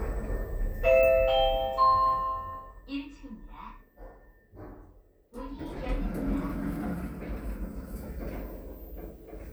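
From 1.49 to 2.97 s there's zipper noise: the level drops by around 15 dB in unsmoothed 1 dB jumps, roughly ten a second. Each jump puts a tiny click in the waveform, so you hear a fast ticking riding on the sound while it fades.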